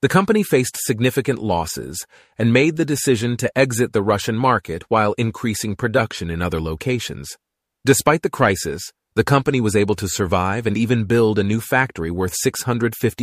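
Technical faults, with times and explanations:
No technical faults can be heard in this speech recording.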